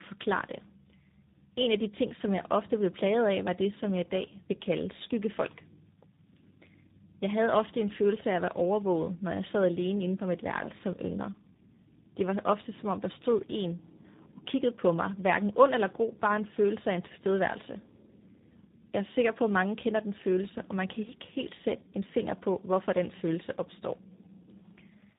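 Tandem speech coding throughout: three speech codecs in a row each re-coded the previous one's damage, leaving rough, muffled, warbly speech with nothing above 3.8 kHz.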